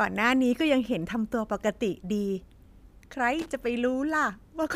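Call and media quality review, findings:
Loose connector crackle, 3.39–3.49 s: short irregular burst of scratchy crackle over the speech, about 0.1 s long. Probably a worn or dirty contact in the cable or jack, making and breaking as it shifts, chopping the signal and popping on any DC present.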